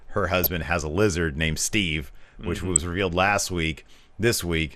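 It's a speech clip with a dull, gurgly, granular edge the whole way through, likely MP2 compression starving the upper sub-bands of bits, which points to roughly 80 kbps. Then from 0.42 to 0.47 s, just before "has a lizard named", there's a short burst of DAB burbling, where a small scattering of bit errors slipped past error correction across five frames, putting brief blips into individual sub-bands.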